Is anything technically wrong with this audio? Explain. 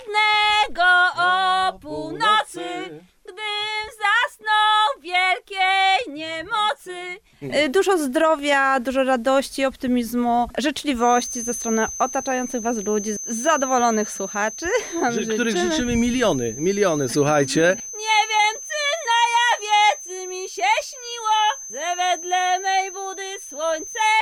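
Yes. From 10.93 s until the clip ends at 24.21 s there is a feedback whistle. A loudspeaker-to-microphone loop likely sits right at the edge of feedback, so a single 6.2 kHz tone keeps ringing without building up. It is a thin, steady whistle, roughly 15 dB below the main sound, swelling and fading slowly in level.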